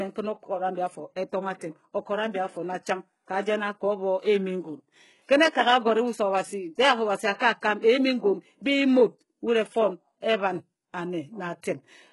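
HE-AAC compression runs through this entire speech clip, with heavy damage and nothing above 11.5 kHz. The treble is likely rebuilt by spectral band replication from copied lower bands, so s sounds turn gritty and metallic, which points to a very low bitrate around 12 kbps.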